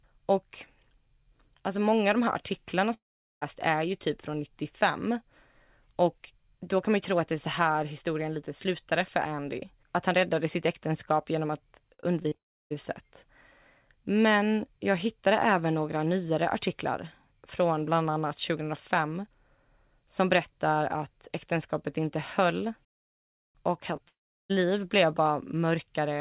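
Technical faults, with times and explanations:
2.94–3.43 s, long network dropout: right after "av de här artiklarna" the speech breaks off for about half a second. The receiver keeps the last sound going as a short fading buzz, then there's roughly 0.42 s of near-silence before it picks up again at "är ju typ från", with the missing stretch simply gone. That pattern of a brief tail and then dead air likely comes from the network delivering nothing for that whole window, far too long for the receiver to paper over.
11.93–12.37 s, repeated packet loss (robotic sound): just after "sitt äktenskap genom att" the speech turns choppy. There are five separate holes in under half a second, the longest about 51 ms. Each one gets filled by stretching the previous sound, and together they cover roughly a third of that span, so the speech keeps stuttering with bits dropping out.
12.37–12.72 s, long network dropout: the choppy patch runs straight into a full cut of about a third of a second. 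There's a quick fading continuation and then about 0.32 s of quiet before the speech resumes, with that piece lost for good. Coming directly after the burst of small losses, this likely reflects the connection stalling outright rather than just hiccuping.
23.96 s, short concealed packet loss: a 20 ms hole, only about half of it actually patched. The receiver extrapolates from the last bit of speech and blends back in, so you hear a tiny smear or wobble.
24.08–24.51 s, long network dropout: a moment after that glitch the speech drops out for about 0.42 s. It's a short fading tail, then roughly 0.35 s of silence, then the speech carries on further along without the lost portion. The sequence of a small glitch followed by a real gap likely points to the link degrading over a fraction of a second.
Throughout, the sound has the narrow telephone-band quality of the G.711 mu-law call path at 64 kbps, with nothing above 4 kHz.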